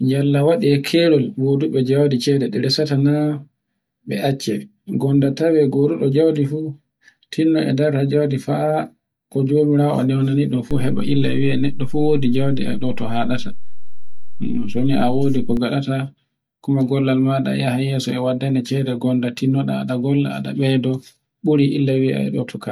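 At 10.71 s a DC step occurs in this speech clip: the waveform's zero line abruptly jumps to an offset of about -17 dBFS and holds there until 15.57 s, when it steps back. Each edge produces a low thump while the speech continues unchanged. On a waveform view the whole trace visibly sits shifted off centre between those times. A spectrogram shows a brief low-frequency smear at each transition.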